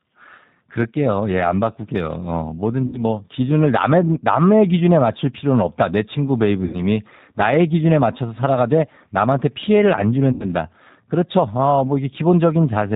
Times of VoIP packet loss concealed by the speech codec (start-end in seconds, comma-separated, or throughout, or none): 2.87-3.04, 6.65-6.81, 10.32-10.45